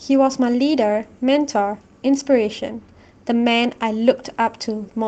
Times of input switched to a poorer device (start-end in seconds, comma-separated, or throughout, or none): none